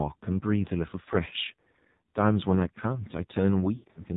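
Speech squeezed through the AMR narrowband mobile codec, and it's rough going: nothing above 4 kHz survives, and the heavy damage gives the voice that buzzy, synthetic edge you get when the vocal-tract model has very few pulses to work with. That level of coarseness fits a low mode of around 5.9 kbps. Then from 3.76 to 4.05 s there are lost AMR speech frames, with about 140 ms of audio missing in patches across a roughly 200 ms stretch. In each gap the decoder keeps replaying the last good pitch and vocal-tract settings at dropping gain. The longest gap runs 80 ms, long enough for the sound to smear out and sag toward silence before it comes back thin and rough. The pattern fits about seven 20 ms frames failing their checksum over the radio link.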